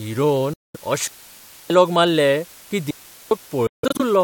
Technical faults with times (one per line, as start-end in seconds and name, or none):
0.00-4.24 low bit depth with dither
0.53-0.77 Bluetooth dropout
1.07-1.70 digital wireless dropout
2.91-3.31 digital wireless dropout
3.67-4.02 Bluetooth dropout